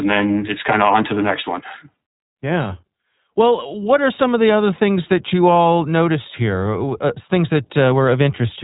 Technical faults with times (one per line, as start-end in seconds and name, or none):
0.00-8.64 iLBC codec